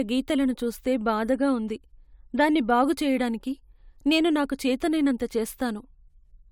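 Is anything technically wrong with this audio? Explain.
No, nothing in this speech recording points to a technical fault anywhere along its signal path.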